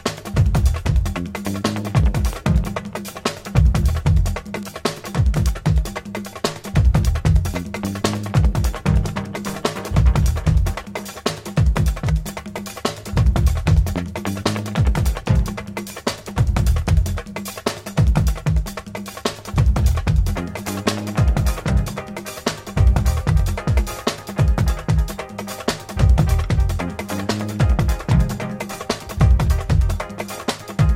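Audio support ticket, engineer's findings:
No fault found on listening: no dropouts, clipping, glitches or level anomalies heard anywhere in the recording.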